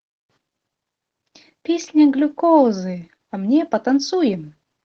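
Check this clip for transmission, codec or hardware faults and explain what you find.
One codec fault runs through the whole clip: Opus voice compression. The speech sounds hoarse and slightly robotic. SILK models the lower band by linear prediction, and a thin CELT layer covers the top. Coarse excitation coding, fitting a bitrate around 16 kbps, causes the damage.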